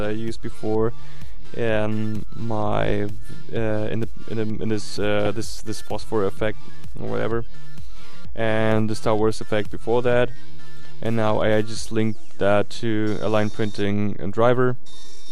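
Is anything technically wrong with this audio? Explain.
Yes, there are two faults. Throughout, the audio sounds dull and granular with a gurgling edge, likely from MP2 compression at a low rate that fits about 80 kbps. Too few bits leave upper sub-bands switched off or flickering, and the remaining bands are coarsely quantised, so the damage is plainly audible.

At 5.26 s there is DAB burbling. Bit errors, at a rate of a small fraction of a percent, slipped past error correction into the MP2 data and corrupted samples. Single sub-bands get hit over what points to a handful of frames, giving brief blips of noise.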